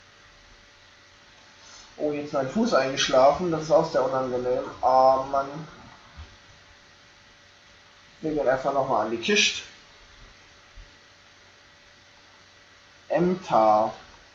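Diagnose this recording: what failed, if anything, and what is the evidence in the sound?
Nothing failed; no fault is audible anywhere.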